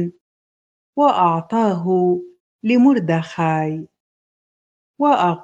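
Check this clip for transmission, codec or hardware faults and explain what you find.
Nothing stood out on listening; the audio showed no transmission, codec or hardware problem that I could hear.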